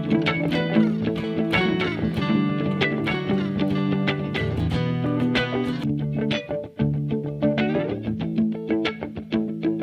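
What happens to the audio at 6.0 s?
Nothing goes wrong at 6.0 s; the audio plays through that moment intact, with no dropout, click or distortion.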